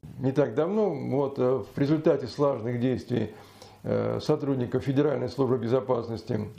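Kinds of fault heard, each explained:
No kinds of fault are heard in this clip.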